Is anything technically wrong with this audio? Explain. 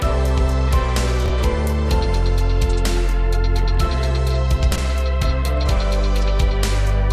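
Yes. Chunks out of order occur at 1.26 to 1.30 s (one chunk late) and 4.72 to 4.78 s (two chunks late). Blocks of about 21 ms play after their successors. This gives a brief jumbled stutter at the hard joins. Unlike a dropout, no sound is missing and there is no silent gap.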